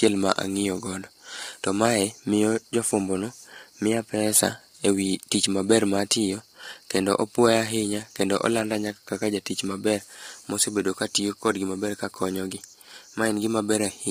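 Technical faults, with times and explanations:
Throughout, low-delay AAC compression: the speech is heavily roughened and grainy, with noise filling the gaps between harmonics. This is likely AAC-ELD's short frames at a rate near 24 kbps. A spectrogram shows blurred harmonic lines and a thin, patchy top band.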